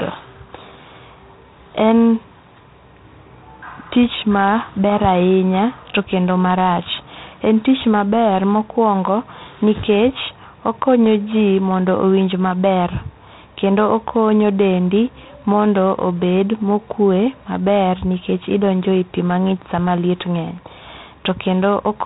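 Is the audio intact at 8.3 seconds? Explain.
No. At 8.3 seconds, as throughout the clip, G.726 ADPCM coding at 24 kbit/s leaves too few bits for each sample's predicted difference, so a harsh, rasping hiss rides on the speech and swells with its level, unlike steady background noise. Nothing above 3.8 kHz survives.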